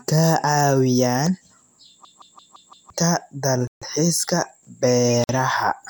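From 2.05 to 2.90 s, a system hang loop takes over. One 171 ms slice of speech repeats five times, a stutter at about 5.9 per second. The driver froze while the hardware kept replaying its ring buffer, which fits an 8192-sample buffer. About a second of audio is lost.

At 3.67 s the speech cuts out for 141 ms, then resumes at 3.82 s. This is a playback stall. The likely cause is the player running short of data or its thread being blocked.

From 5.24 to 5.29 s, a 51 ms gap opens in the speech. This is a gap at a join of encoded pieces. Separately encoded segments were joined untrimmed, so encoder delay and padding remain. The codec smears the edges, so the silent part is shorter than the gap.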